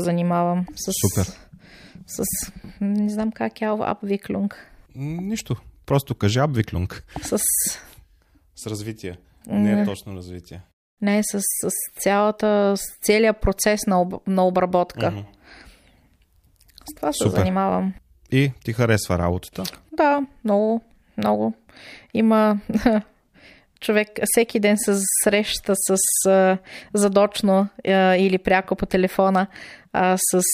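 Nothing goes wrong anywhere in this stretch of speech, so there's no fault to point to at any moment.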